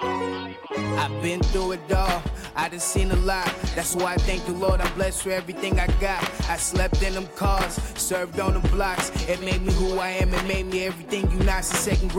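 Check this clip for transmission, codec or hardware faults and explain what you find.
No faults turn up anywhere in the clip.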